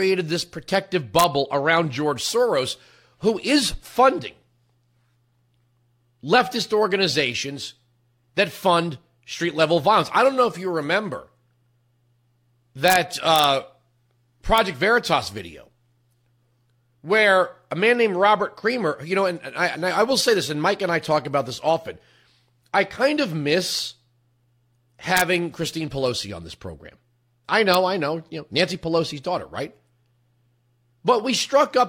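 Sharp, violent cracks break through the speech at 1.19 to 1.24 s, just after "this protective", then at 12.88 to 12.96 s, 13.36 to 13.44 s, 14.58 s, 25.17 to 25.21 s, and 27.74 s, after "on this program I". This is integer overflow: peaks reaching or exceeding the limit by about 0 to 1 dB wrapped to the opposite sign instead of being held at the limit.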